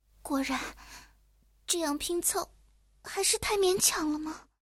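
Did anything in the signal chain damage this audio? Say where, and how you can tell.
Yes. At 2.11 s the stream switches to an adaptive stream at a lower bitrate, and stays there until the end. This is a codec and network fault. The switch is sudden, with no gap, and nothing above 12.1 kHz survives, so the treble dulls and encoding artefacts rise. This fits a drop from about 96 to 48 kbit/s AAC. On a spectrogram the upper band is cut off flat at 2.11 s, while the waveform stays continuous.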